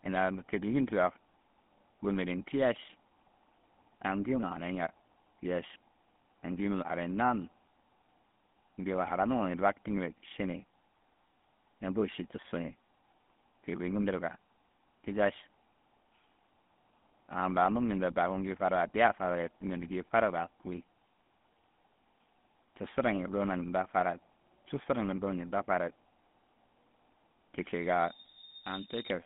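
GSM full-rate codec damage runs through the whole speech clip. The voice is modelled as a vocal-tract filter fed by sparse, evenly spaced pulses, giving a buzzy, gravelly roughness, which fits 13 kbps GSM. The band is roughly 150 Hz to 3.5 kHz, with nothing above 3.8 kHz.

Loudspeaker feedback squeal runs from 27.72 to 29.23 s. The microphone picks up its own loudspeaker, and at 3.7 kHz the loop gain passes one. That tone swells over about three-quarters of a second into a squeal about 5 dB above the speech.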